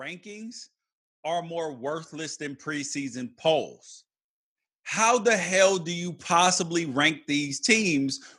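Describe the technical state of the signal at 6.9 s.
At 6.9 s the automatic gain control is partway through raising its gain, a rise it began at 4.96 s and continues until 8.22 s, judging the input too quiet. Voice and background noise swell together, climbing about 5 dB over that span.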